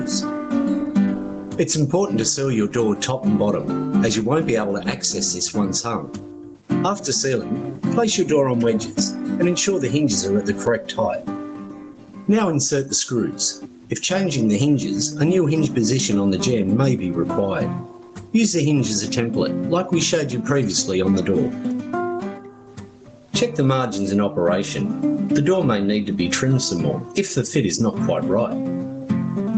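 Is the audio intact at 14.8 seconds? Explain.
No. At 14.8 seconds, as everywhere else in the clip, there is gain pumping: the level keeps lurching, ducking down under each loud sound by around 15 dB, leaving loud and soft parts squashed close together. The likely cause is input gain set far too high, with a fast limiter or compressor clamping down on every loud moment. The call processing's upper limit of 8 kHz is a normal band limit, not a fault.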